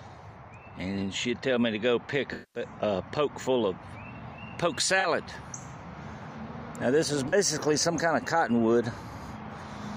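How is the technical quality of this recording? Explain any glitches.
The recording has two kinds of technical fault: comb filtering in the opening seconds, and three short dropouts patched over by the decoder.

From 0.0 to 3.7 s there is channel delay (comb filtering). One channel lags the other by a couple of samples, and summing them cancels high frequencies, with the first notch around 10 kHz. The top end sounds dull. A spectrogram shows a dark horizontal band near 10 kHz.

AAC frame loss with concealment occurs at 2.33 to 2.62 s (about 213 ms, which fits ten lost frames), 5.00 to 5.06 s and 7.28 to 7.34 s (about 43 ms each). The decoder fills each gap from the last good spectrum, which leaves smeared, noisy or phasey patches. These appear as blurred, texture-less blocks on a spectrogram.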